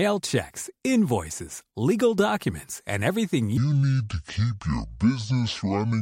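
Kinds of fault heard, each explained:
Section at the wrong speed: from 3.57 s to the end, the speech plays at 0.6 times its proper rate, so it drags and sinks by roughly ten semitones, turning deep and slow. The likely cause is that stretch being run against the wrong clock during editing or playback. Unlike a pitch shift or a time-stretch, where only one property moves, here tempo and pitch change together at the same instant.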